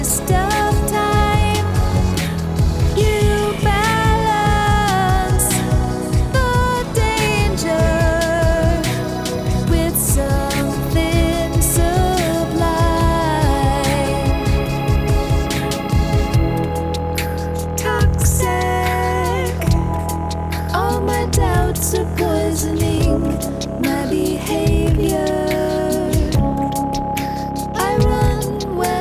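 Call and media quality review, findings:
No findings in this call and media quality review.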